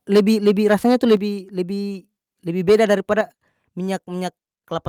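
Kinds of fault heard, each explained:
Microphone overload: From 0.14 to 1.16 s, and again from 2.68 to 3.21 s, the loudest syllables turn harsh and crackly because their peaks are flattened against a hard ceiling. The first stretch is about 7 dB over and the second about 4 dB, with a small share of samples pinned flat. The likely cause is microphone input volume set too high for the converter. Unlike codec distortion, the roughness follows loudness and appears only on the peaks.
Microphone volume stepped down: The whole signal drops abruptly by about 2 dB at 0.17 s, then by about 6 dB at 1.17 s and again by about 6 dB at 3.21 s. The last two drops come just as the distorted stretches end. The likely cause is call software lowering the device's input volume after detecting clipping. It differs from an automatic gain control or compressor because each drop is a single step with no ramp and no recovery. 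It differs from a talker moving away because the background falls by the same amount.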